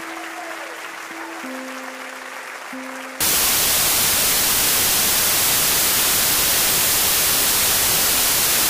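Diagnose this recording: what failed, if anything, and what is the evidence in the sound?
From 3.2 s to the end, loud, harsh broadband noise replaces the sound: samples built from the wrong bytes, a sample-format conversion fault promoting low bits.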